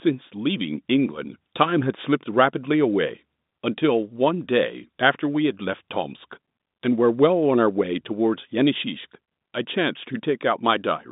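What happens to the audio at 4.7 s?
At 4.7 s the audio is intact, with nothing wrong beyond the narrow telephone band of its G.711 coding, which stops short of about 3.8 kHz.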